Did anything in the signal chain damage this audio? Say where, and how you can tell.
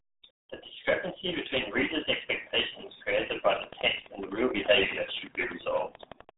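Yes. At the codec stage, the whole clip is band-limited to roughly 150 Hz to 3.7 kHz, with nothing above 3.8 kHz. The speech is heavily muffled and gargly. This points to the RealAudio 14.4 codec, fitting an 8 kbit/s stream that discards the upper band and coarsely models the rest.

A train of clicks runs from 3.56 s to 6.3 s. It consists of around thirty near-identical pulses, regularly spaced at 11.7 per second and peaking about 15 dB above the signal. The steady periodic pattern suggests the likely cause is electrical interference picked up in the analogue wiring.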